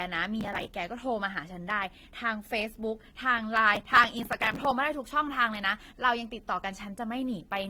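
A speech clip with two kinds of fault. The whole clip carries a mix of compression artefacts from different codecs, and nothing is heard above 20.2 kHz. This is likely transcoding between lossy codecs. The layered artefacts point to AAC followed by Opus at low bitrates. Processor overload crackle also appears twice, from 0.41 to 0.72 s and from 3.75 to 4.71 s. The audio turns gritty and torn there. Many buffers of a few milliseconds each missed their deadline again and again. Each one was skipped, leaving tiny hard-edged gaps. The second burst is longer, with more misses.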